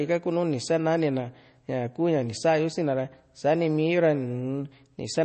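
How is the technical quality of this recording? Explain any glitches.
The recording is plainly degraded by MP3 compression throughout. An MP3 encoder likely starved of bits, fitting roughly 32 kbps, cut everything above 8.3 kHz and dropped weak detail, leaving the speech dull, watery and swirly.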